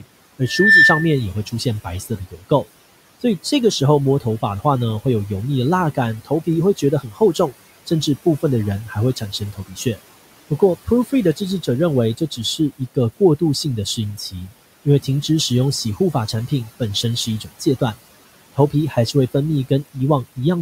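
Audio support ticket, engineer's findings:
Noise suppressor artifacts, whole clip. Room noise sits about 18 dB under the speech and is cut by about 17 dB. Background dips between phrases and returns under speech. Probable component: noise suppressor. Per-band gain tracks steady noise frame by frame.

Loudspeaker feedback squeal, 0.45 to 1.19 s. Single 1.8 kHz tone. Swells within roughly 0.3 s to around 10 dB above the speech. Probable component: mic and loudspeaker loop. Loop gain exceeds one at that frequency.

Speech cut by the noise suppressor at 1.46–2.65, 3.21–5.05, 5.95–9.97, 10.5–15.29, 15.84–17.81 and 18.56–19.15 s. Word parts sound swallowed. Drops about 11 to 18 dB, roughly 2 s in total. Suppressor misreads quiet speech as noise.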